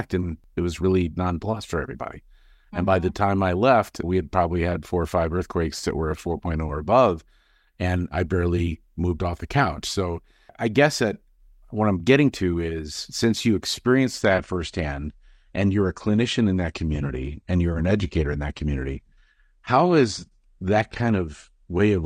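At 14.2 s the adaptive stream switches abruptly, with no gap, to a lower bitrate until the end at 22.05 s. The treble disappears, leaving a flat spectrogram ceiling at 9.8 kHz, and codec artefacts rise, which fits a drop from 96 to 32 kbit/s.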